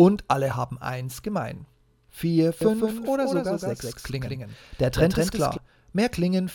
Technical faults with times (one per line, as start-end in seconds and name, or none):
2.61-5.57 doubled audio track